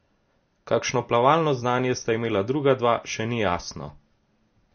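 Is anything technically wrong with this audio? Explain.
Yes. The speech has audible damage throughout, likely from MP3 compression. Nothing sounds above 6.5 kHz. With too few bits, the encoder cuts the treble and drops weak frequency lines frame by frame. That leaves a watery, swirling texture, consistent with a low bitrate around 32 kbps.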